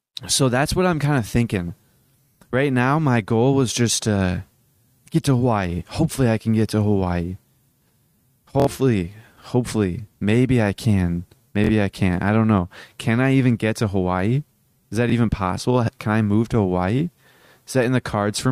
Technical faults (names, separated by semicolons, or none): Bluetooth stutter